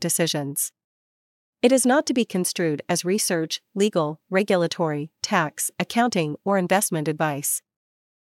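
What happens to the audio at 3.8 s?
Nothing goes wrong at 3.8 s; the speech plays through that moment intact, with no dropout, click or distortion.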